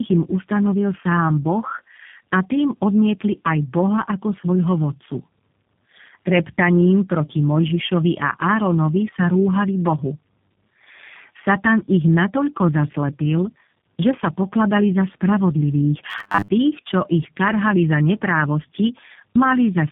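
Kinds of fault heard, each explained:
Tandem speech coding: The speech sounds like it passed through two low-rate speech codecs in a row, possibly G.723.1 then G.729A with a G.711 link between. Each stage re-encodes the previous stage's damage, so the speech comes out rough, muffled and warbly for the whole clip. On a spectrogram there is a narrowband telephone ceiling, and the formant bands look smeared and blotchy.
Robotic sound from repeated short buffers: From 16.10 to 16.55 s, just before "čo ich", the speech turns into a rigid metallic buzz at 100 Hz that still loosely tracks the speech. The likely cause is late-arriving audio patched by replaying the last 10 ms chunk, with about half the real signal skipped. A waveform shows identical 10 ms blocks repeating, and a spectrogram shows evenly spaced harmonics at multiples of 100 Hz.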